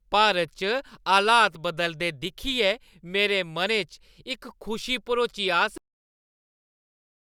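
A speech recording that stops abruptly at 5.78 s, mid-sound, and falls straight into digital silence with no natural decay for the remaining 1.6 s. This is a cut-off end: the final stretch of audio buffers was never written or played back.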